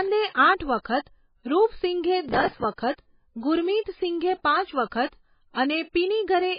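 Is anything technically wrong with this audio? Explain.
Yes, there are three problems: a codec coloration running through the whole speech clip, and two short events.

Throughout, the sound is heavily degraded, with nothing above 5 kHz and a watery, swirling quality where weak frequency components flicker in and out between frames. The likely cause is MP3 compression at a very low bitrate, consistent with something near 16 kbps, where the encoder drops weak spectral lines and cuts the treble at a fixed point. Unlike a plain low-pass filter, the damage shifts over time rather than simply dulling the top end.

From 0.31 to 0.35 s, a pre-echo of about 35 ms comes before an attack. A transform codec spreads its quantisation noise across a whole block, so when a sharp onset lands late in the block, noise sized for the loud part fills the quiet moment before it. It is heard as a brief hiss that anticipates the attack, which then sounds softened. 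Unlike crackle, it sits only before the transient and is tied to it.

From 2.29 to 2.64 s there is processor overload crackle: a gritty, tearing burst riding on the speech that stops when the stretch ends. The processor repeatedly failed to finish its small audio buffers in time, which fits buffers of about 5 ms, with dozens of deadlines missed. Each miss replayed a fragment of old audio with hard edges. A single dropout would give one click, whereas this is a dense run of them.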